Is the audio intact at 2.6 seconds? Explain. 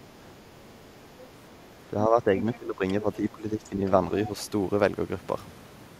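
No. From 2.55 to 2.83 s the speech is suppressed in double talk. With both sides talking at once, the echo canceller likely could not separate the talker from the loudspeaker echo, so it turned everything down. The voice dips by up to about 15 dB for roughly 0.3 s. Just before this, from 2.37 to 2.56 s, the other side's voice leaks through faintly, at about 15 dB below the speech.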